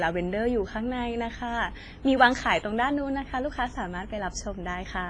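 Throughout the speech, heavy ringing and washiness, with a hiss that breathes with the signal, point to likely WMA compression at a low bitrate near 24 kbps. Long blocks smear noise around syllables. A spectrogram shows a hard ceiling at 10.6 kHz and gaps where weak components were zeroed.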